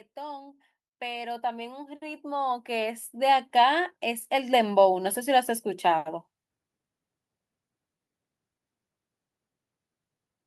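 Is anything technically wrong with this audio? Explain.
Yes. Automatic gain rising runs from 0.14 s to 5.24 s. The automatic gain control judged the incoming level too low and stepped its gain up gradually, by about 18 dB across those five seconds. Because the boost applies to everything the microphone picks up, the speech and the background noise swell together, so the room tone climbs audibly along with the talker rather than the voice alone getting louder.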